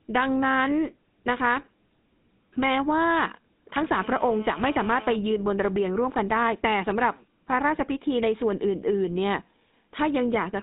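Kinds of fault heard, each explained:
GSM full-rate codec: the speech passes through a vocal-tract model driven by sparse pulse excitation, leaving it buzzy and gravelly, confined to about 200 Hz to 3.7 kHz.
GSM phone buzz: a nearby 2G phone on a call bursts 217 times a second, and the audio circuit rectifies it into a raspy 217 Hz buzz from 3.93 to 5.16 s, about 18 dB below the speech.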